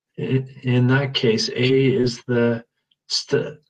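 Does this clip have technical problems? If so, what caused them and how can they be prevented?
Yes. Short concealed packet loss occurs at 1.67–1.71 s and 2.01–2.05 s. About 20 ms went missing each time; the decoder extrapolated sound to cover it, leaving brief smears. A larger jitter buffer or a steadier network path would prevent it.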